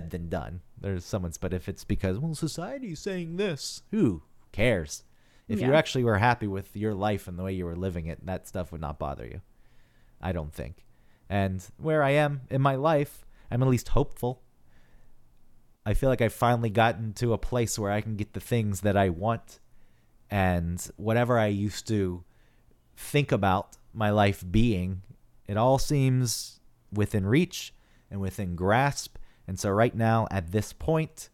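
Speech recording with no audible technical faults anywhere in the clip.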